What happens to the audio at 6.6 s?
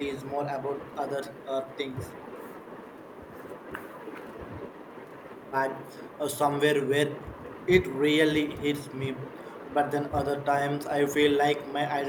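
Nothing goes wrong at 6.6 s: the speech carries on intact through that moment with no audible fault.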